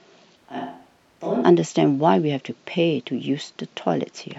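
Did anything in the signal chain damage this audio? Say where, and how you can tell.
Yes. From 0.38 to 1.42 s the speech turns roomy and hollow, thinner in the bass and about 10 dB quieter, with faint room noise rising. The likely cause is a switch to a distant microphone at capture. A plain gain drop wouldn't add reverberation.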